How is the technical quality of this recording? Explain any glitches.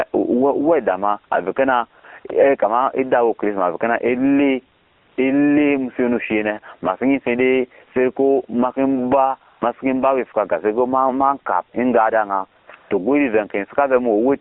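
The recording is technically poor: a heavily compressed mobile-phone codec runs through the whole clip, the level pumps, and several short gaps are filled with synthetic noise.

Gain pumping runs throughout, with a gain swing of about 20 dB. Loud and quiet passages sit unnaturally close in level, and the speech sounds squashed. The likely cause is input gain set far too high, with a fast limiter or compressor clamping down on each loud syllable and releasing in the gaps.

AMR narrowband mobile codec damage is also present throughout and is plainly audible. The band is confined to roughly 250 Hz to 3.4 kHz, so the speech is thin and muffled, with no low body and no air on top. The coding is coarse, giving a buzzy, synthetic edge that fits a low AMR-NB mode around 7.4 kbps. The codec models the vocal tract with a few excitation pulses per frame, and at this rate too few bits remain to carry natural detail.

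AMR comfort noise appears seven times: 2.00–2.04 s and 2.20–2.24 s, both after "ohaweda ma ave kena"; 2.28–2.30 s; 4.76–5.18 s, between "chrisma ave kena ele" and "ele muso ya no"; 9.50–9.62 s; 12.60–12.68 s; and 12.76–12.90 s. In each case the sending phone judged the talker silent and stopped transmitting speech frames. The receiver then generated smooth, steady noise from a rough level-and-spectrum description. These stretches sound like a flat hiss switching in and out, replacing the real background, with the longest one lasting 0.42 s.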